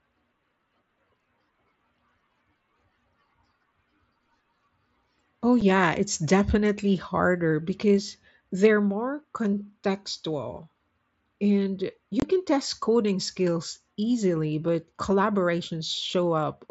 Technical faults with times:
5.61 unconcealed Bluetooth headset packet loss
12.20-12.22 unconcealed Bluetooth headset packet loss

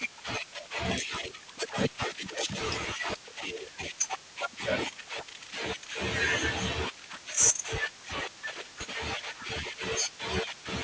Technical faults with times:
0.00-10.83 resampler restarted on every block

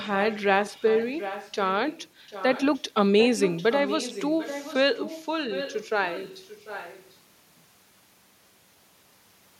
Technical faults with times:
0.03-1.55 echo leak
1.89-2.82 echo leak
3.19-7.16 echo leak

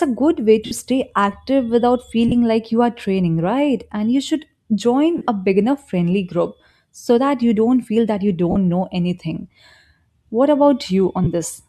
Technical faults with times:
0.66-0.71 lost LE Audio frames
2.28-2.32 lost LE Audio frames
5.17-5.28 lost LE Audio frames
8.51-8.56 lost LE Audio frames
11.24-11.26 lost LE Audio frames

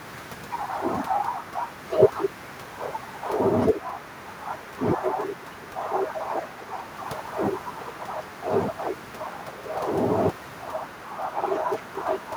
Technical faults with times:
none

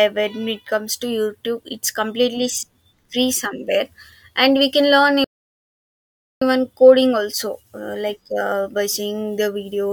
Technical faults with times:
5.24-6.42 playback stall

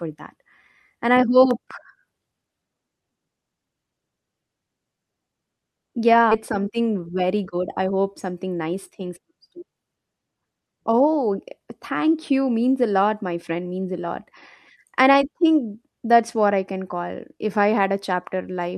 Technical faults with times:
1.51-1.73 loud pop
6.31 skip ahead
6.59-9.27 jitter buffer speed-up

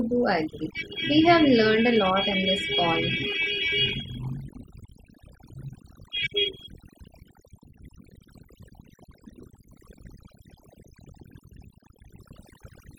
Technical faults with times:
0.00-12.99 overdone noise removal

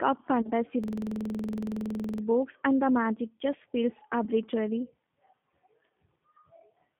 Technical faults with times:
0.00-6.99 G.729 codec
0.42-0.50 VoIP packet loss concealed by the speech codec
0.84-2.23 system hang loop
4.24-4.28 VoIP packet loss concealed by the speech codec

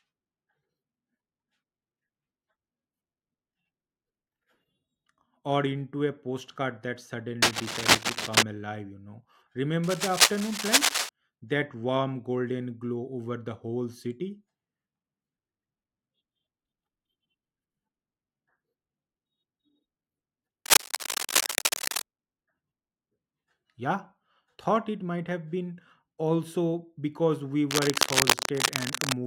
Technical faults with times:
7.42-8.43 cable scratch noise
9.83-11.09 cable scratch noise
20.66-22.02 cable scratch noise
27.71-29.17 cable scratch noise

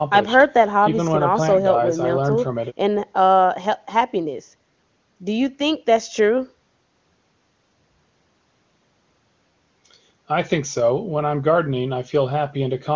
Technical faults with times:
none

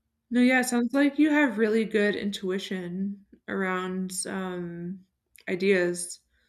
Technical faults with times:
none

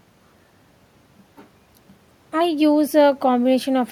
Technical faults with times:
none

